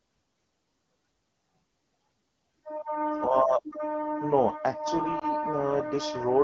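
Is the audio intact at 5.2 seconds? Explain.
No. Between 5.19 and 5.24 seconds there are lost AMR speech frames, with a concealed gap that fits a single 20 ms frame. Radio errors corrupted the frame, so the AMR-WB decoder repeated the previous pitch and vocal tract settings at reduced gain. This is heard as a brief dip or warble. On a waveform the amplitude briefly sags. On a spectrogram, the harmonics flatten into a short, smeared, slightly fainter stretch before normal detail resumes.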